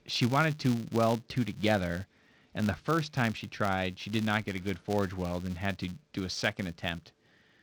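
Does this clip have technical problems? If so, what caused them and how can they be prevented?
Yes: a filter restarted on every block runs throughout. Each 256-sample block starts from silence, leaving a tick at about 188 Hz that forms a buzz. Unlike steady mains hum, it rises and falls with the speech level. Keep filter state across block boundaries.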